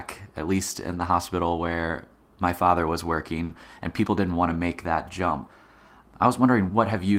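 A speech recording with a few network hiccups. Around 3.45 to 3.51 s there's a short concealed packet loss: about 40 ms never arrived, so the decoder carried the previous sound forward and blended back, leaving a brief smear. The clip also has three spots of lost packets rebuilt from error correction, at 0.91 to 1.13 s (120 ms), 3.49 to 3.51 s, and 4.49 to 4.55 s. The following packets held low-bitrate copies, so there's no gap, just rougher, noisier stretches.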